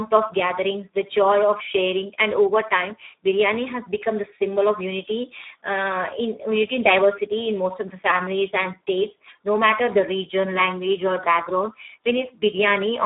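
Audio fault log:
throughout: Speex codec. The speech sits in a narrow 250 Hz to 3.7 kHz band with nothing above 3.8 kHz, and it sounds heavily damaged: hoarse, noisy and edging toward robotic, which fits a low setting near 8 kbps. Too few bits are left to model the excitation. Simple telephone band-limiting would keep the voice clean within the band, but here the hoarse, noisy texture comes from the coarsely coded excitation.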